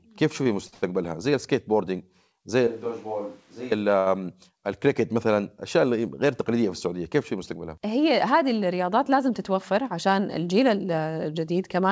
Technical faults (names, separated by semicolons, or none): short stall from a late packet; switch to a distant microphone; jitter buffer speed-up